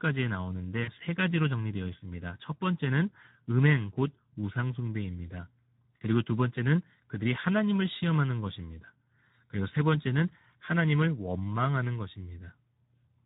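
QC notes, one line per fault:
throughout Speex codec: the speech is hoarse and noisy, plainly audible across the clip, which fits a low Speex setting of about 11 kbps leaving too few bits for the excitation. Unlike a transform codec, there is no swirling or pre-echo.
0.83 to 0.92 s VoIP packet loss concealed by the speech codec: about 40 ms of speech, which fits two lost 20 ms frames, is stretched out and fades as the decoder extrapolates its last pitch and filter, then stays weak or distorted briefly. Unlike a plain dropout, there is no silence or click.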